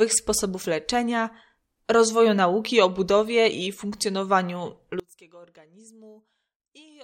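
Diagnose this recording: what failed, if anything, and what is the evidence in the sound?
From 5.00 s to the end, the speech drops about 26 dB to a faint copy. Likely one channel inverted in analogue wiring, cancelling centred sound in mono.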